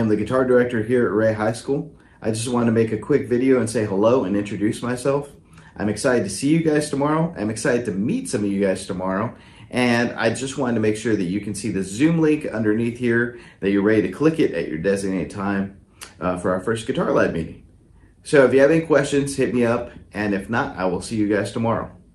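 Nothing here stands out as a fault; the audio simply carries the top-end roll-off around 12 kHz you'd expect from an Opus call connection.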